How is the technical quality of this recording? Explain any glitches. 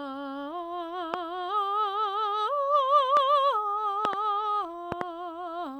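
The music is marred by loud pops at four points. Single pops land at 1.14 s (about 20 dB above the music) and 3.17 s, and double pops span 4.05–4.15 s and 4.92–5.03 s (each about 15 dB up). Each is likely a sudden voltage step or pulse, from a plug, switch, static or driver glitch, that the following circuitry shapes into a sharp thump while the music continues beneath. On a waveform these show as tall spikes; on a spectrogram, thin vertical broadband lines.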